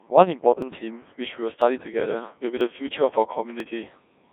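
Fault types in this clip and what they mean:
Codec 2 vocoder, throughout: the speech is rebuilt from pitch, voicing, energy and a coarse spectral envelope sent at 1.6 kbit/s, so the original waveform is gone. It sounds heavily robotic and buzzy, confined to about 200 Hz to 3.6 kHz, with nothing above 3.7 kHz.
Audio missing between chunks, at 0.62, 1.62, 2.61 and 3.60 s: a tiny slice, well under 10 ms, drops out roughly once a second and the edges butt together, likely from audio handled in one-second blocks losing samples at each handover, heard as brief regular skips.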